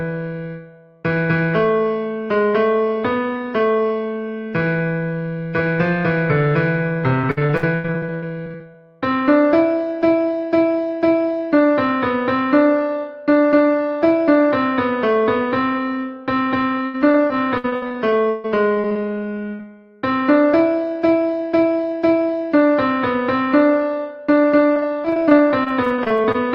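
Repeated packet loss (robotic sound) occurs at 7.21–8.76 s, 16.86–18.98 s and 24.74–26.36 s. Packets keep dropping out, and each hole is patched by extending the preceding sound. This leaves choppy stretches, with gaps of up to 91, 141 and 24 ms.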